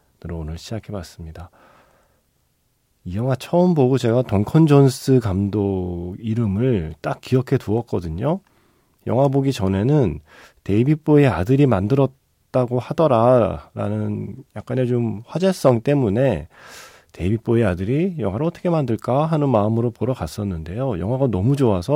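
Speech recording with no audible technical faults.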